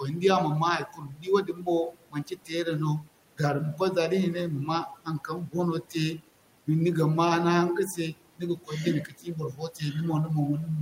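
A speech clip with speech cut by the noise suppressor. Just after "man ma", at 0.93 to 1.27 s, speech dips by about 13 dB. Shorter dips follow at 1.44 to 1.67 s, 9.08 to 9.27 s and 9.53 to 9.81 s, about 7 to 10 dB. The suppressor mistook quiet speech for the room noise, which sits about 24 dB below the voice, and turned it down.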